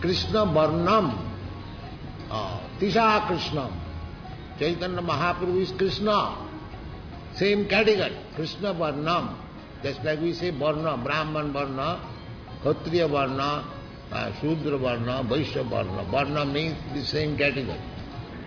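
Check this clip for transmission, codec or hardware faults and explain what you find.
Nothing stood out on listening.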